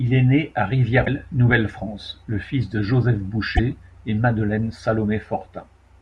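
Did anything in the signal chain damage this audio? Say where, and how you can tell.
Yes. The damage is in the codec stage: damaged data in a compressed stream. A short glitch cuts in at 1.02 to 1.07 s, right after "est né à". A second, briefer blip sits at 3.57 to 3.59 s. Both are abrupt and non-acoustic. They last only tens of milliseconds. Bad bytes in the compressed frames there made the decoder misread them, lose sync, and hunt for the next valid frame header.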